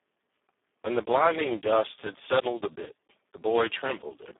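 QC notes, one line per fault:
Throughout, Speex codec. Speech sounds hoarse and robotic, confined to 200 Hz to 3.5 kHz. Too few excitation bits, which fits about 4 kbps.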